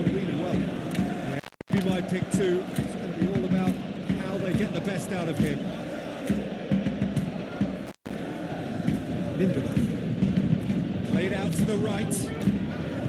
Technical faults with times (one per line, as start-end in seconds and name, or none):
1.31-1.79 intermittent contact
7.87-8.15 intermittent contact